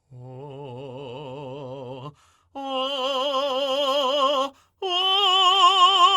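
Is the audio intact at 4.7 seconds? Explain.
Yes, the music plays through 4.7 s without any audible fault.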